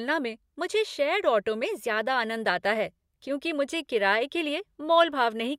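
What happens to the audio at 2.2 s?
Nothing goes wrong at 2.2 s; the speech there is intact, with no dropout, click, distortion or other audible fault.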